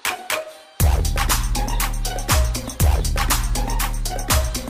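No technical faults are audible anywhere in the audio.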